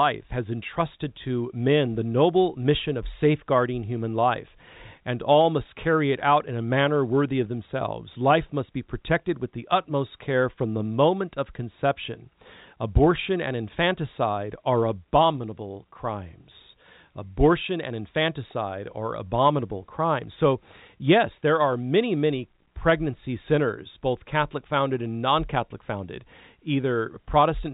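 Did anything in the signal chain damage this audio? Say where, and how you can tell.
No, nothing in the chain stood out as damage on listening; the speech comes through as ordinary G.711 telephone audio, band-limited to just under 4 kHz.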